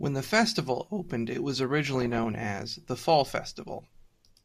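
A short speech recording with DAB burbling from 1.87 to 2.43 s, just after "opened it was". Residual bit errors, around half a percent, slip past error correction into the MP2 data across 25 frames, so corrupted samples put short blips of noise in individual sub-bands and corrupted scale factors make sub-bands leap in level for up to a frame. A spectrogram shows scattered rectangular patches of energy, each confined to one sub-band and one frame; the waveform shows irregular bursts of amplitude.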